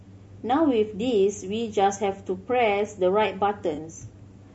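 Throughout the speech the voice sounds rough and grainy, with noise filling the gaps between harmonics and a thin, somewhat synthetic top band. This is likely low-delay AAC compression: short AAC-ELD frames resolve pitch poorly, and the damage is plainly audible at a rate that points to around 32 kbps.

From 3.75 to 3.79 s a brief smeared, noisy patch interrupts the voice. This is AAC frame loss with concealment. The decoder rebuilt a missing stretch, consistent with one lost frame of about 20 ms, by reusing the previous good spectrum.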